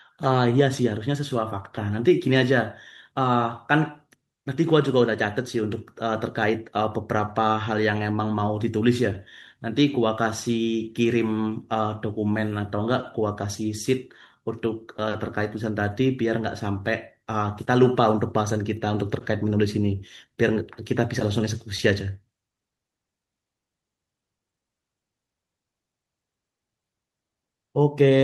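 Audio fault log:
No audible faults anywhere in this speech recording.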